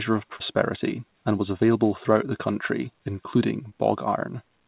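At 0.36 to 0.42 s and again at 3.70 to 3.73 s, short concealed packet loss: audio arrived too late, so the receiver extended the preceding sound, heard as a brief smear rather than a silent gap.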